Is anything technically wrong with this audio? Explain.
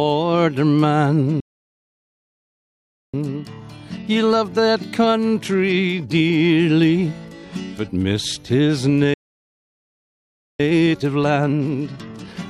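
Yes. At 1.40 s the sound cuts to silence for about 1.7 s, and again at 9.14 s for about 1.5 s: a playback stall, likely the player starving for data or being blocked.

Each stall is followed by time-compressed catch-up, from 3.14 to 6.14 s at 1.1x and from 10.60 s to the end at 1.25x. The audio sounds hurried at unchanged pitch, as small pieces are cut and cross-faded to clear the backlog.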